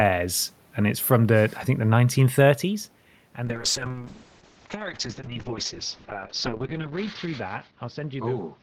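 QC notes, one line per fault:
3.46–8.62 s, call bitrate drop: encoder rate fell from 48 to 6 kbps and bandwidth narrowed from 20 kHz to 8 kHz, so speech turns coarse, watery and muffled.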